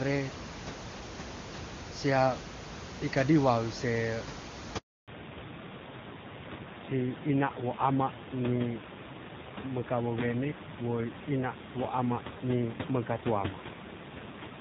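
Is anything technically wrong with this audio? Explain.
Yes. There are two faults, both linked to a network handover. A handover gap runs from 4.78 to 5.08 s. The call switched networks and no speech frames arrived for 300 ms. The sound fades within a few tens of milliseconds and stays silent until the new link starts, so whatever was said then is lost.

A fallback to narrowband follows at 5.08 s and lasts to the end. Before the gap, the HD Voice sound is clean and full, with room noise about 10 dB below the speech. After it, nothing above 4 kHz remains. The speech turns duller and rougher, which fits a low-rate narrowband AMR codec.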